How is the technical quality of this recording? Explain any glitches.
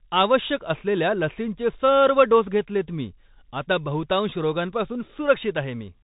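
The quality is poor: for the whole clip the speech sounds thin and boxed-in, with nothing above about 3.8 kHz, scratchy s sounds, and a grainy hiss under the speech. That is the Bluetooth CVSD headset codec. CVSD sends one bit per sample, stepping the waveform up or down with an adaptive step size, and the sound fits a 64 kbps stream. Loud, bright moments outrun the step and distort, and the band limit removes the top of the speech.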